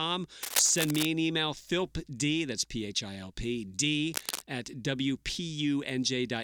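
From 0.43 to 1.05 s, just before "an email philpd", and again from 4.14 to 4.42 s, right after "h i l p", there's cable scratch noise: ragged, crackly rustling only a little quieter than the speech, likely a worn lead or connector being moved.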